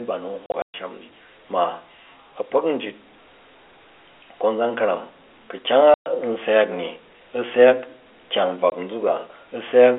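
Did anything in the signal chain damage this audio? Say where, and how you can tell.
Yes, the damage is in the network stage: packet loss filled with silence. Between 0.46 and 0.74 s the speech breaks into scattered holes totalling about 180 ms, the longest run 120 ms. There's a solid 120 ms gap at 5.94 to 6.06 s and a lone 20 ms dropout at 8.70 s. Every gap is a multiple of 20 ms, which fits 20 ms packets. The receiver played silence for the missing packets, so each hole has abrupt edges. The G.711 narrowband tone underneath is just the phone line.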